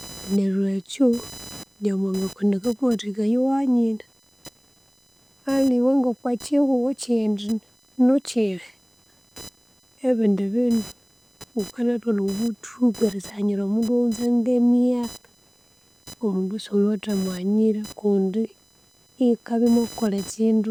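Changing load on the computer's processor, graphics card or mouse is shifting the ground shared with the audio circuit, producing computer activity noise throughout the speech: a buzzing, chirping whine near 1 kHz, roughly 25 dB below the voice, rising and falling with machine activity rather than speech.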